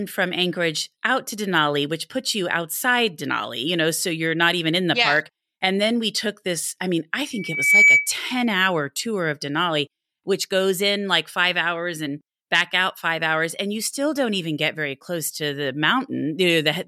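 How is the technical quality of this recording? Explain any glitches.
There's one clear problem: a loudspeaker feedback squeal from 7.33 to 8.12 s, between "this I mean I" and "hour tour of". The mic is picking up a speaker it's feeding, and around 2.3 kHz the loop gain tips past one, so that single tone feeds on itself. You hear it swell over roughly 0.4 seconds into a piercing whistle, ending up around 10 dB louder than the speech, before it stops.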